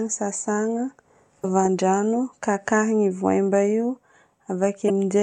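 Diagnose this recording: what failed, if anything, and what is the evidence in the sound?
Damaged data in a compressed stream, heard at 1.41 to 1.44 s and again at 4.86 to 4.90 s, each a brief disruption about 40 ms long breaking into the speech. The fault sits at the codec stage, in the encoded data itself: corrupted bytes give the decoder frames it cannot parse correctly, so it emits garbage or drops them, loses frame sync, and resumes once it finds the next valid header.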